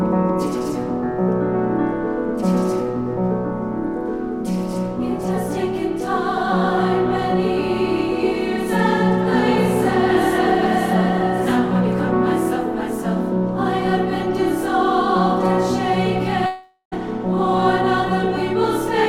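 At 16.46 s the sound smears into a fading buzz that dies away, leaving about 100 ms of silence before audio resumes at 16.94 s with about 460 ms of material missing. This is most likely a long network dropout. Unlike a brief packet loss, the concealment runs out, so the audio jumps ahead instead of continuing smoothly.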